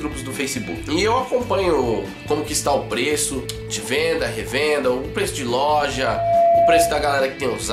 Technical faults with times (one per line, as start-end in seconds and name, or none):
5.83-7.12 loudspeaker feedback squeal